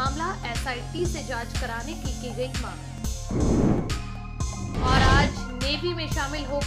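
The audio skips twice, at 2.98 s and again at 4.97 s, each time losing only several milliseconds with no silence left behind. The two sides are butted straight together, so the sound jumps forward rather than pausing. That is what separates it from an ordinary dropout, which leaves an audible gap. The two-second spacing likely points to audio missing between chunks, where a recorder working in 2-second blocks drops a sliver at each handover.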